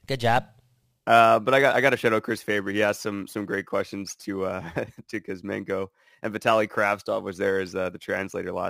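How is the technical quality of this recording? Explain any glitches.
The quality suffers from crude rate conversion throughout. Samples were repeated rather than filtered, which fits a 44.1 to 48 kHz step, leaving a gritty, inharmonic fizz roughly 25 dB under the speech that tracks its louder, brighter parts.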